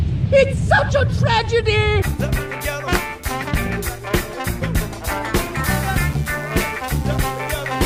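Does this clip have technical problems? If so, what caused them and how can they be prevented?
Yes. Mains buzz runs from 5.76 s to the end, at 7.86 s: a raspy 60 Hz buzz roughly 25 dB below the sound, its sharp harmonics reaching kilohertz, unlike a smooth low hum. Keep cables shielded and away from dimmers or rectifiers.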